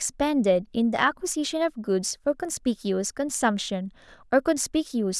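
No technical faults can be heard in this speech recording.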